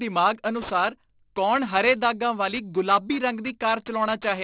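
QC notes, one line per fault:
throughout: aliasing. The speech sits in a band ending sharply at 4 kHz, which fits a drop from a 44.1 kHz rate to 8 kHz without a low-pass filter first. Energy above 4 kHz has folded back below it as false, unrelated tones, roughly 20 dB under the voice, so sibilants sound gritty and metallic. On a spectrogram, sibilant energy runs hard up to the 4 kHz edge, with mirrored, downward-sloping streaks where rising components have reflected.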